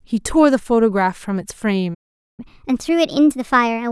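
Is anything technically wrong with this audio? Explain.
Yes, there are two related problems, one right after the other.

At 1.94 s the speech cuts out dead and stays silent until 2.40 s, a gap of about 0.44 s, before picking up again. That's a playback stall: the player most likely ran dry of buffered data or had its audio thread held up, so nothing reached the output until it recovered. It doesn't sound like a natural pause, more like the audio just froze mid-phrase.

From 2.40 s to 3.91 s, right at the end, the player is clawing back that lost time with catch-up at higher speed. It's resampling the backlog at 1.25 times normal speed, and because resampling moves pitch along with tempo, the speech comes out noticeably hurried and about four semitones higher, a bit chipmunk-like, for that whole last stretch.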